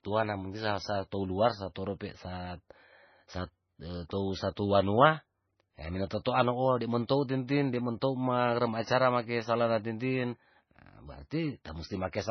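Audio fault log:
Throughout: MP3 compression, likely. The speech sounds watery, with heavy codec damage and nothing above 6 kHz. This fits a very low bitrate near 17.5 kbps.
6.25 s and 7.08 s: pre-echo. A short hiss leads each attack, the first just after "wanua hee". Block noise spreads 10 ms and 17 ms before each onset.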